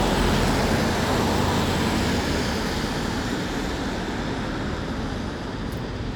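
Nothing goes wrong anywhere in this one, so there's no fault to point to at any moment.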